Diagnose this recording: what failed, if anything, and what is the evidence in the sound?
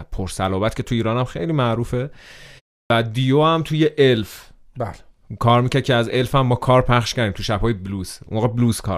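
The fault is a clipped start after a pause, at the playback stage. After a silence of about 0.31 s, the speech resumes abruptly at 2.83 s. Its first 72 ms are missing. The output device dozed during the gap and needed time to wake before passing sound again.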